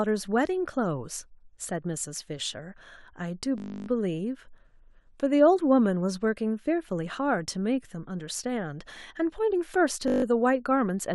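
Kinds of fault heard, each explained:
System hang loop: the machine or its driver stalled while the sound hardware kept replaying the same 20 ms slice of its ring buffer, so one tiny chunk of the speech repeats exactly. Because the loop is that short it fuses into a steady 50 Hz buzz rather than a stutter, first from 3.58 to 3.88 s and again, more briefly, from 10.08 to 10.24 s, with essentially no audio lost around either one.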